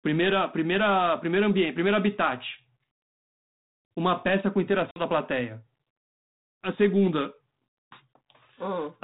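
At 4.91 s, speech drops into a hard 50 ms silence and returns slightly distorted until 5.02 s: packet loss on an ADPCM call, which desynchronised the decoder's predictor.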